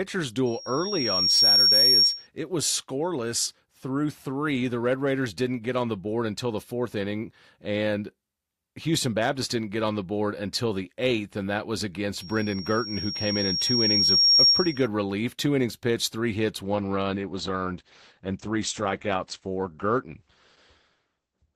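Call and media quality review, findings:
Loudspeaker feedback squeal, 0.46–2.27 s: steady pure tone at 5.6 kHz swelling over about a second to around 10 dB above the speech. Mic picking up its own loudspeaker; loop gain above unity at that frequency, so it rings up.

Same loudspeaker feedback squeal, 12.20–14.87 s: identical 5.6 kHz tone, slower rise of about two seconds, again roughly 10 dB over the speech. Same acoustic loop, gain above unity.

Adaptive stream at a lower bitrate, 16.63 s to end: abrupt, gapless loss of treble, nothing above 8.6 kHz, with more codec artefacts. Stream switched to a lower rendition after a connection slowdown, consistent with a drop from about 64 to 12 kbit/s Opus.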